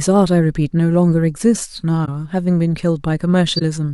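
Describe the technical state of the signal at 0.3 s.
At 0.3 s the signal is intact, with no audible fault at that point.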